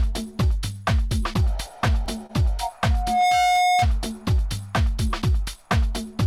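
At 2.26 s there's a short stall from a late packet. A packet didn't show up on time, so the receiver held the last bit of sound for about 28 ms and then carried on from where it left off. Nothing's lost, just a brief stretched moment with a faint buzz or dip.

Then from 2.90 to 3.87 s you get a loudspeaker feedback squeal. The mic is hearing its own speaker, and at 724 Hz the loop runs away: a single tone swells over roughly 0.4 s until it sits a few dB above the audio.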